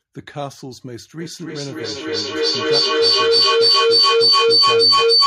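A piercing tone around 5 kHz rises out of the speech from 1.2 s and keeps swelling until the clip ends, peaking about 16 dB above the talker, with the loop coming round roughly every 0.3 s. This is feedback howl: a second device in the same room picks up the loudspeaker output and sends it back round the call, and because each pass comes back louder, the loop locks onto its favoured frequency instead of dying away.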